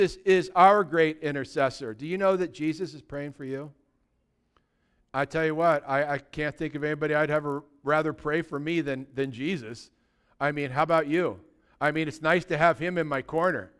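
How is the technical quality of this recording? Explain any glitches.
The recording has one fault, present throughout: the resampler restarted on every block. The rate converter, which appears to have been halving the sample rate (consistent with 48 kHz down to 24 kHz), processed each 20 ms block in isolation. At every block boundary it had no real neighbouring samples, so each edge picked up a small error. Because the blocks are short, those errors repeat 50 times a second and merge into a low buzz at 50 Hz that rides on the speech and drops away in the pauses.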